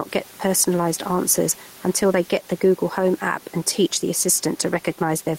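Throughout this speech clip the room noise sits about 29 dB below the speech, and the speech itself sounds squashed, with loud and quiet syllables pressed close together. That is gain pumping, with a swing of roughly 5 dB. The likely cause is input gain set far too high, with a fast limiter or compressor clamping down on each loud sound.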